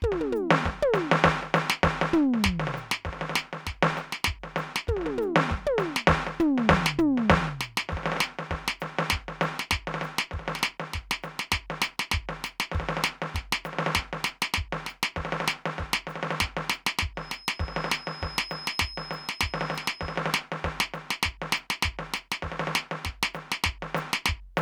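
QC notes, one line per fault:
17.14–20.23 s, feedback whistle: a thin, steady 5.1 kHz tone sits about 15 dB under the music, swelling and fading slowly, likely from a loudspeaker-to-microphone loop held just short of runaway.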